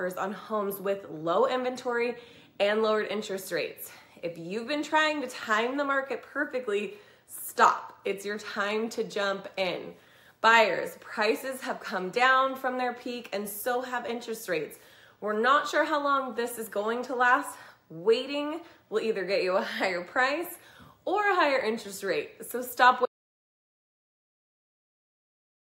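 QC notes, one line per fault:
23.06 s to the end: audio dropout to silence. The sound stops abruptly mid-flow and the rest is silence, with no room tone or noise floor, unlike a fade or noise gate. It likely comes from a lost input while recording continued.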